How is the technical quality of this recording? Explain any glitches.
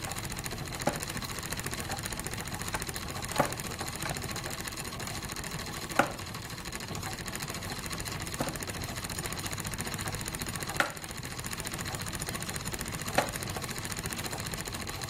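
The recording has three brief glitches, all from damaged data in a compressed stream, at 1.83, 4.74 and 8.26 seconds. At each point part of the encoded data was lost or overwritten, so the decoder misreads the affected frames, loses sync and searches for the next valid frame header. Each glitch is heard as a short chirp or blip lasting about 12 to 16 milliseconds, where the sound briefly breaks into a garbled burst before the audio resumes.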